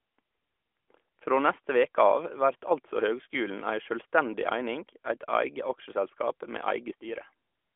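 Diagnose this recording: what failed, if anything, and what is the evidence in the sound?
Nothing in the recording points to a failure at any stage. The speech comes through the AMR narrowband mobile codec at what sounds like its 12.2 kbps mode, confined to a telephone band of roughly 300 Hz to 3.4 kHz with nothing above 3.5 kHz and only light coding colouration.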